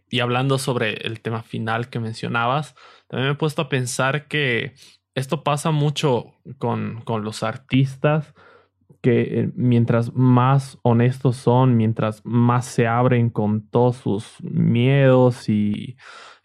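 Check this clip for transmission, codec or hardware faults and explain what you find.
There's one fault here: de-emphasis applied wrongly, from 7.74 to 15.74 s, starting right after "con con los". A treble-cut filter hit audio that didn't need it, so the top end rolls off smoothly, about 11 dB down at 10 kHz relative to 1 kHz. The speech goes noticeably dull and muffled.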